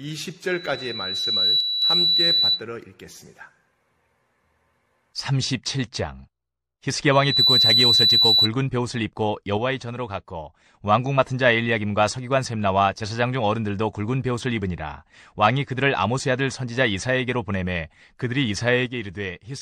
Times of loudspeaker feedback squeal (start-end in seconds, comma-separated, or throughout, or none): 0.47-2.64, 7.12-8.49